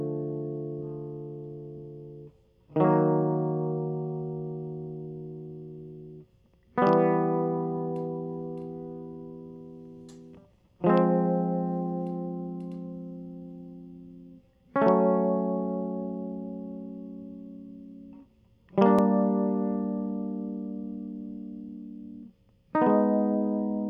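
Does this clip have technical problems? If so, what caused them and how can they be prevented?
No, no technical faults here.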